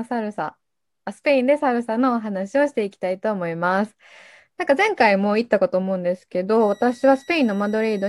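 From 6.60 s to the end, a switching supply whistle sits near 2 kHz, about 30 dB below the speech. A switching power supply running in an audible burst mode, or beating with another, gives a high whistle, here held within about 1924–1939 Hz.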